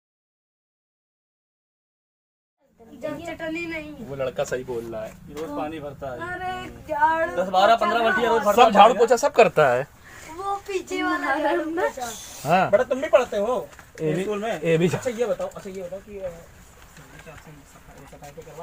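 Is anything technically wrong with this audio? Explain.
No, the signal is technically sound, and the smooth fade-in that begins around 2.5 s and reaches full level by 3.38 s rises evenly without any click or hard edge.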